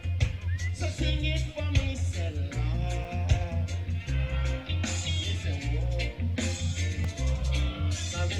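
Two short, hard-edged silences at 3.04 s and 7.04 s, about 5 ms and 3 ms long and 4 s apart, mark a gap between stream segments: boundary timestamps leave holes the player fills with silence. Unlike a dropout, the sound resumes exactly where it stopped.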